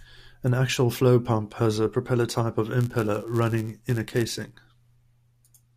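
Block size mismatch (padded) runs from 2.8 s to 4.54 s in this speech. One stage hands over blocks slightly shorter than the next stage expects to read, and the missing tail of each block is filled with silence. That brief gap recurs in every block, producing a buzz at about 99.6 Hz over the speech. The stretched blocks slow the audio to 0.996 times normal speed, while the timbre stays the same.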